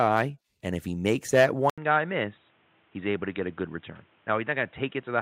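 An input switched to a poorer device at 1.70 s, right after "if he makes that", lasting to the end. There is a gap of about 80 ms, then the speech returns with nothing above 3.8 kHz, so it sounds dull and boxy. A faint new background noise sits well below the speech, and the level stays about the same. The cause is likely a change of input, to another microphone or a headset's narrow call profile.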